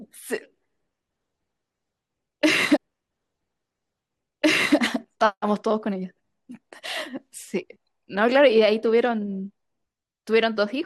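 A speech recording with a stream segment repeated between 2.75 and 4.76 s: about 2.0 s of the programme plays a second time, with a small blip where playback jumps back. The player fetched or queued the same segment twice. Unlike a buffer stutter, which loops a few milliseconds and sounds mechanical, or an echo, which overlaps a delayed copy, this is a clean, full-length replay of a continuous stretch, adding roughly two seconds to the clip.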